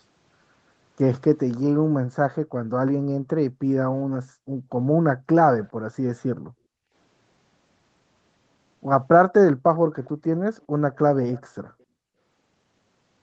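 From 1.83 to 6.93 s, the background is gated by the echo canceller: room sound dips by up to about 40 dB, for roughly three seconds in all, then returns. Nothing is added, which sets it apart from echo. Faint repeats at 5.63 to 5.70 s and 10.04 to 11.83 s sound like a delayed copy arriving 412 ms late and far below the main speech, most likely an echo leak from a loudspeaker on one side of the call.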